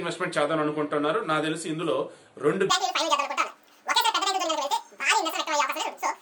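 Wrong sample rate from 2.70 s to the end: the audio is played back at twice the rate it was recorded at, with no conversion, consistent with 24 kHz material run at 48 kHz. Everything doubles in speed and jumps up a full octave, sounding high and hurried.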